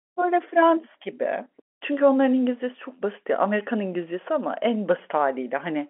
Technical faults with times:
none

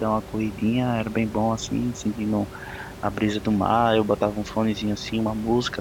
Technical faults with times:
none

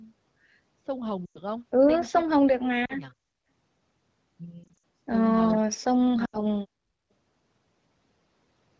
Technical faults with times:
1.25-1.39 lost AMR speech frames
2.59-3.16 speech suppressed in double talk
2.85-2.93 lost AMR speech frames
4.64-4.78 lost AMR speech frames
5.66-6.12 speech suppressed in double talk
6.25-6.46 lost AMR speech frames

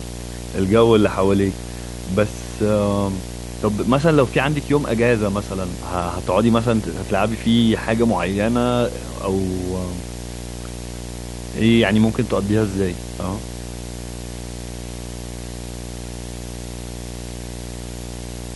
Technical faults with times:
0.00-18.56 video or display buzz

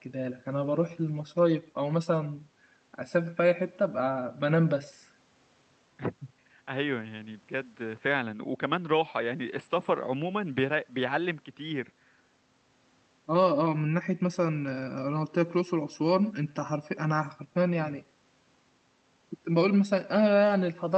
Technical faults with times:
0.00-20.98 echo with no canceller

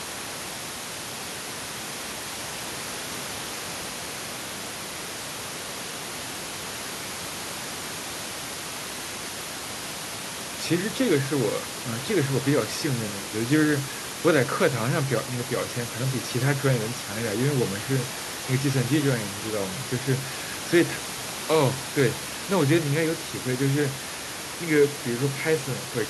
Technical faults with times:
none

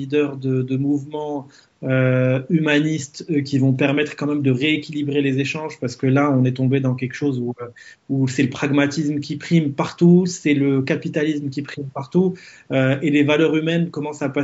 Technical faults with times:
none

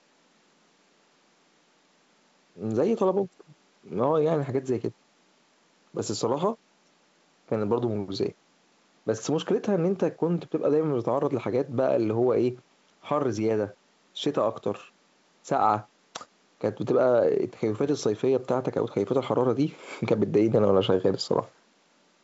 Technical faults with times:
none

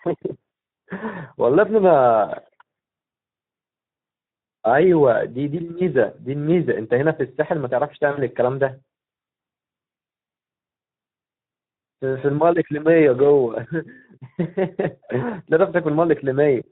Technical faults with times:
0.00-16.72 Speex codec
8.11-8.22 VoIP packet loss concealed by the speech codec

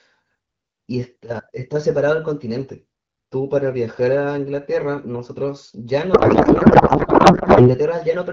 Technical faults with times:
6.13-7.75 codec payload misread

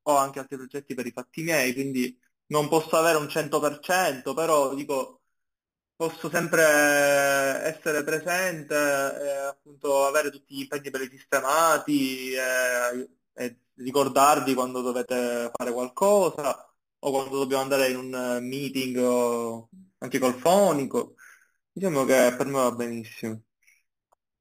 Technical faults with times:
0.00-24.41 imaging from sample-and-hold upsampling

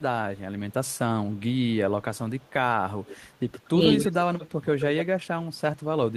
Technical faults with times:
0.73-0.98 echo leak
3.05-3.16 echo leak
3.53-5.04 echo leak

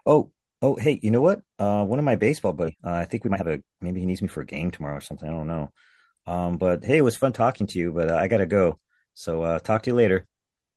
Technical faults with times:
2.65-2.67 skip ahead
2.69-5.25 jitter buffer speed-up

